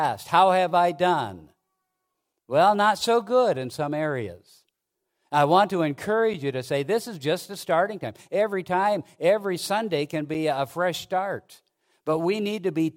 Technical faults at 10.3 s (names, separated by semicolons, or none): gap between chunks